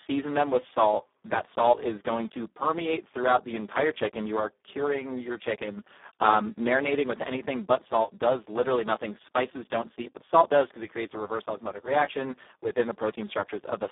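Throughout the clip, the speech passes through the Speex codec at a very low quality setting, which fits a rate of about 4 kbps. So few bits are left for the excitation signal that the speech loses its natural texture. The damage is heavy: the voice sounds noisy and hoarse. The line is confined to roughly 250 Hz to 3.6 kHz, with nothing at all above 3.8 kHz, so the sound is thin and muffled.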